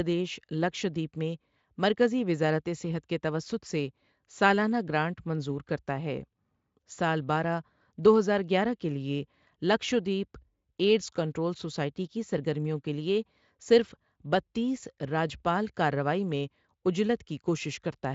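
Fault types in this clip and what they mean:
No fault types are present in this clip; the speech carries the sound of a Speex codec at what sounds like a high setting, with the band ending near 7.6 kHz.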